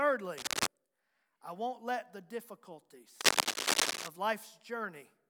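A speech clip with cable scratch noise from 0.37 to 0.67 s, at about the level of the speech, and from 3.2 to 4.08 s, somewhat louder. A worn, moved cable or connector is the likely cause, appearing as dense, ragged broadband smears on a spectrogram and jagged spikes in the waveform.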